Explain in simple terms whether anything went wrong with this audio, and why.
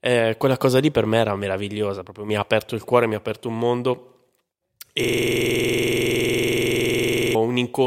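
A system hang loop starts at 5.04 s and runs until 7.35 s. The computer stalled, but the sound hardware kept replaying whatever sat in its small playback buffer. So one sliver of speech, about 46 ms long (which fits a 2048-sample buffer), repeats exactly, about 50 times at 21.5 times per second. That fast, identical repetition turns the speech into a rapid stutter until playback recovers.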